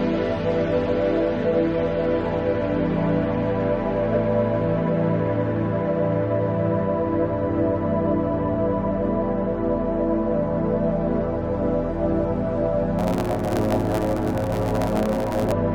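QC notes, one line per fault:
12.98–15.52 s, block size mismatch (truncated): a steady buzz at 109 Hz rides on the audio, which runs about 1.09 times fast while its timbre stays normal. One stage hands over blocks roughly 9% longer than the next stage accepts, so the tail of each block is dropped and 109 hard splices per second produce the buzz. Unlike a sample-rate error, timbre doesn't shift. Unlike a padded mismatch, the audio speeds up rather than slowing down.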